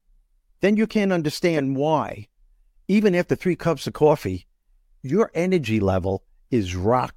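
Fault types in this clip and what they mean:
No fault types are present in this clip, so there is nothing to list or explain.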